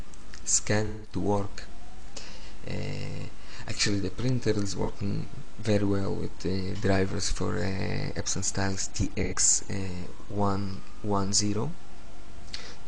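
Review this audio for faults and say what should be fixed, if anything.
AAC frame loss with concealment occurred three times: the decoder lost coded frames and rebuilt the gaps from the last good spectrum. The longest, 0.86 to 1.14 s, fits about four frames and sounds smeared and noisy; shorter phasey patches follow at 4.83 to 4.89 s and 9.23 to 9.34 s. Protecting the AAC stream with error-resilient transport, forward error correction or retransmission would stop the frames from being lost.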